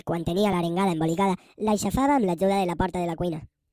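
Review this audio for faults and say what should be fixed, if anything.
Throughout the clip the speech sounds high-pitched and hurried, running 1.45 times too fast and about 6.45 semitones sharp. This is a wrong sample rate: the samples are replayed faster than they were captured, with no conversion, which fits 22 kHz audio played at 32 kHz. To prevent it, store the true rate in the file header and resample explicitly whenever the playback rate differs.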